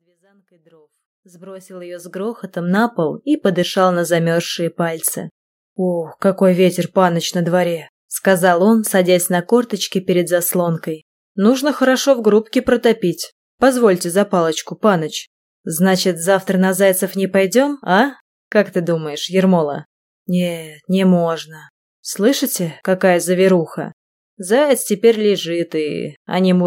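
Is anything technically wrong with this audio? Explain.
No, nothing is technically wrong with this audio; the smooth fade-in from the start to about 2.91 s is ordinary editing.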